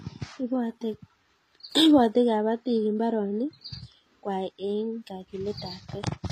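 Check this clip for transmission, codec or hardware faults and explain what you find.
One fault runs through the whole recording. The speech has the layered artefacts of transcoding between lossy codecs, likely a WMA encode at about 96 kbit/s followed by HE-AAC at about 24 kbit/s. The second encoder spent its few bits on the first one's artefacts and added its own swirly, metallic texture. A spectrogram shows nothing above 14.9 kHz and patchy, blocky high bands.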